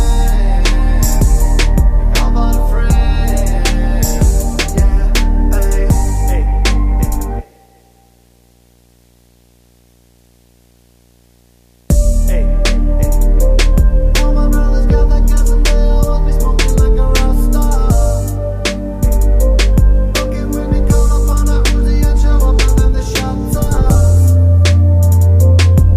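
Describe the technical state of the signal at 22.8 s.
At 22.8 s a low buzz sits beneath the sound with a fizzy hash above it, plus a faint whine at 15.7 kHz, the whole layer roughly 35 dB below the signal. It is video or display buzz, present for the entire clip rather than just this moment. A screen or video cable is coupling into the audio path: the buzz follows the 59.94 Hz field rate, and the whine is the line-scan rate leaking through.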